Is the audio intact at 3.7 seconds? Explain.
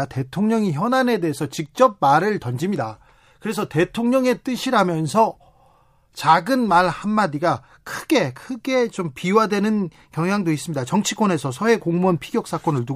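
Yes, at 3.7 seconds the speech plays through intact, with no dropout, click, distortion or other fault heard at that moment.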